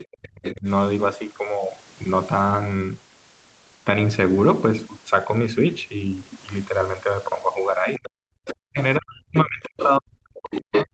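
From 0 to 0.06 s, and again at 0.44 to 0.54 s, 7.94 to 8.09 s, 8.47 to 8.54 s, 9.64 to 9.89 s and 10.36 to 10.85 s, the other side's voice leaks through in scraps. They rise from about 20 dB below the speech at first to near equal level at the end, likely from incomplete echo cancellation. From 0.04 to 0.67 s, and from 7.99 s to the end, the speech is suppressed in double talk. It dips by as much as about 40 dB and drops out in pieces.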